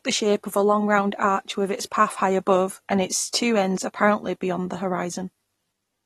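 Speech runs the whole six seconds with a dull, smeared top end and a fizzy, warbling texture on sibilants and held vowels. Nothing sounds above about 12.4 kHz, and the codec damage is plainly audible, which points to AAC compression at a low rate, likely AAC-LC at around 32 kbps. A simple low-pass filter would darken the sound without the swirling texture, so the character here comes from coarse quantisation rather than filtering alone. At 3.32 s, between "high above and its" and "ends apparently beyond the", there is a pre-echo: a hiss of about 16 ms comes just ahead of a sharp onset, which sounds softened. The codec's block spread the noise meant for the loud attack back into the quiet moment before it. A reflection or reverb tail would follow the attack, and a click would be a single sharp tick, but this smear arrives before the onset.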